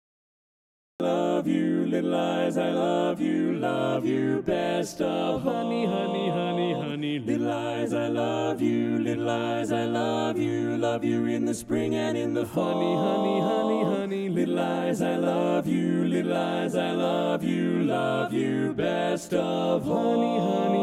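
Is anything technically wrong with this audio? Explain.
Yes, there is a cut-off start. For the first 1.0 s the file holds digital silence, and at about 1.0 s the sound enters abruptly, already in progress, with no natural attack or fade-in. Capture began after the sound was under way, so its opening was never recorded. On a waveform this shows as a flat line that jumps straight to the sound's running level. A spectrogram shows blank black up to 1.0 s, then a hard vertical edge.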